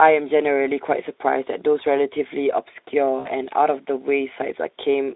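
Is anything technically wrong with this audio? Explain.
Yes. From 3.19 to 3.29 s the speech shows VoIP packet loss concealed by the speech codec. A gap of about 60 ms, which fits three lost frames, was filled by the decoder extending its last pitch and vocal-tract filter at falling gain. Instead of a hole, there is a brief stretched sound, a buzzy tone or coloured noise, that fades. On a spectrogram the harmonics run flat and repeated before dimming. The waveform shows a periodic, steadily shrinking stretch. The narrowband Speex coding, limited to roughly 250 Hz–3.7 kHz, is audible but not a fault.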